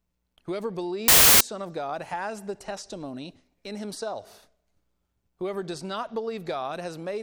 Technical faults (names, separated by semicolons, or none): samples built from the wrong bytes